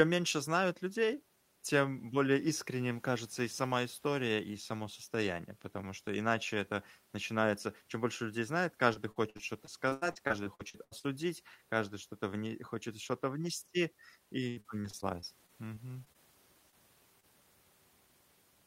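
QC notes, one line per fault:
8.93–11.05 s, repeated packet loss (robotic sound): choppy audio with missing pieces. Holes up to 80 ms arrive one after another, each patched by extending the last sound, so about a quarter of the stretch is filled in.
14.49–16.16 s, repeated packet loss (robotic sound): the same robotic chop returns, milder. Gaps up to 74 ms are covered by continuing prior sound, concealing about 17% of the stretch.
16.70–16.74 s, short concealed packet loss: a brief smear or wobble. About 20 ms never arrived in time and was bridged by continuing the preceding sound, then blended back.
17.20–17.25 s, short concealed packet loss: another momentary smear. A roughly 20 ms hole was filled from the preceding sound before the real audio resumed.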